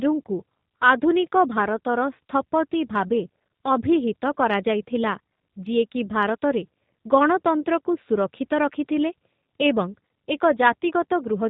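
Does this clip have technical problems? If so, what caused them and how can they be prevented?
Yes. Throughout the speech there is plainly audible G.729 codec damage. At 8 kbit/s the codec rebuilds each 10 ms frame from a vocal tract filter, a pitch predictor and a few fixed pulses, and passes nothing above 4 kHz. The result is muffled, slightly rough and synthetic. Unlike a plain low-pass filter or narrowband telephone line, it also has a buzzy, pulse-driven graininess inside the band that survives. Using a wideband codec such as G.722 or Opus on the call path prevents this.

At 7.62 to 7.64 s there is VoIP packet loss concealed by the speech codec. For about 20 ms, which fits two lost 10 ms frames, the decoder extrapolates from the last pitch and filter state with falling gain. This smears the speech into a brief, fading stretch of sound rather than a gap. Because each frame builds on the one before, the speech stays weak or distorted for a short while after the gap. 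That lingering effect and the absence of silence distinguish it from a dropout or a simple click. A jitter buffer, forward error correction or a more reliable network link would prevent it.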